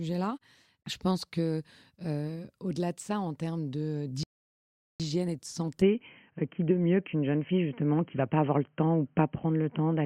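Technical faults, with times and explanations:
4.23–5.00 s, rebuffering stall: after "ça en termes de" the sound stops for 0.76 s, then resumes cleanly with "et de". The waveform goes flat and the spectrogram shows a blank column.
5.82 s to end, switch to a poorer input device (likely): the sound turns dull, with nothing above 3.2 kHz. The spectrogram top goes empty, the level shifts by a few decibels, and a faint new noise floor appears.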